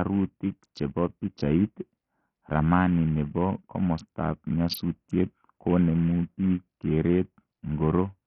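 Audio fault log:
Throughout: Bluetooth SBC compression, likely starved of bits, which fits a low bitrate near 48 kbps. The top sub-bands drop out or flicker, so the speech sounds dull with gritty, aliased noise. A spectrogram shows a ragged, blinking upper band over blocky, coarse energy.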